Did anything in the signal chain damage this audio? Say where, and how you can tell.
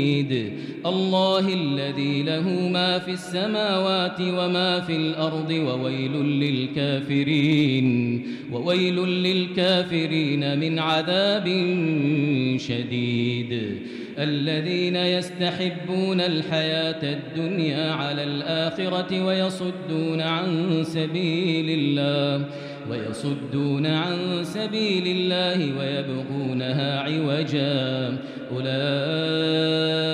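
No, nothing in the signal chain damaged this audio.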